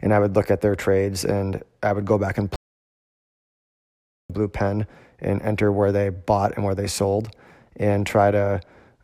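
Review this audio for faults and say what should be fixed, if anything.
Playback stall from 2.56 to 4.30 s, after "would go back and". The sound stops for 1.74 s, then resumes at "blue pen and enter". The likely cause is a player starved of data. A larger read-ahead buffer and an audio thread kept free of blocking work would prevent it.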